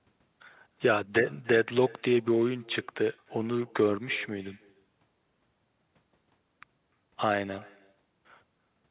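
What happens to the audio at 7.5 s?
At 7.5 s the speech is trailed by a faint, thin copy of itself arriving roughly a third of a second late and sitting about 25 dB below the direct sound. This is echo with no canceller, present throughout the clip. The far end plays the call over a loudspeaker, its microphone picks that playback up, and nothing removes it, so the talker's own audio returns after the network round trip. The call path's band limit means nothing is heard above 4 kHz.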